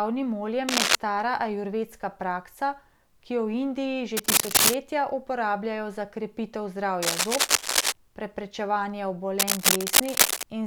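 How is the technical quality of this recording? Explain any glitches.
The recording has four bursts of cable scratch noise. Harsh, uneven scratching, somewhat louder than the speech, covers 0.69–0.95 s (before "ajurvedska praksa"), 4.17–4.74 s (before "uporabljajo za krepitev"), 7.02–7.93 s (after "uporabljajo za krepitev") and 9.39–10.43 s. This is likely a worn cable or connector being moved, its flickering contact resistance spraying ragged noise into the signal.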